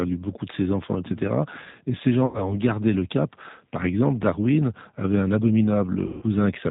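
The whole speech clip passes through the G.729 codec, which sounds like its 8 kbit/s form. Rebuilding speech from a filter and sparse pulses strips everything above 4 kHz and leaves it rough and slightly synthetic. At 2.26 to 2.55 s, just before "gardé le cap", and again at 6.07 to 6.24 s, lost VoIP packets are concealed by the speech codec. It stretches the last sound into a fading buzzy tone or coloured noise over about 80 ms and 150 ms of missing audio, and the speech recovers only gradually.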